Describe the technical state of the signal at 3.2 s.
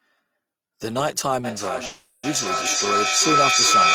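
At 3.2 s the signal is in a feedback howl that began at 1.44 s and runs to the end of the clip. A microphone-to-loudspeaker loop returns more level on each pass, so the repeats build rather than fade and narrow to a tone around 1.5 kHz, with the loop repeating roughly every 0.4 s, and the howl peaks about 7 dB above the speech. Unlike acoustic echo, whose repeats die away and keep the full sound, this grows and collapses to one pitch.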